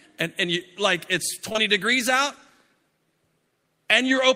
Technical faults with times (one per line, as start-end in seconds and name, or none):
1.49-1.59 short concealed packet loss